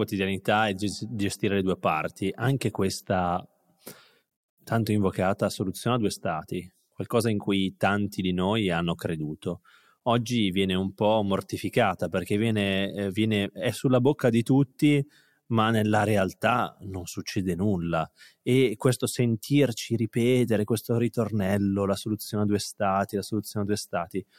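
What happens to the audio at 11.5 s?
Nothing goes wrong at 11.5 s; the speech there is intact, with no dropout, click, glitch or other audible fault.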